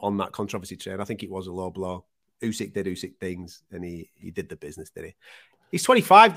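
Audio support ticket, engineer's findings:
Engineer's findings: no fault found in this speech audio.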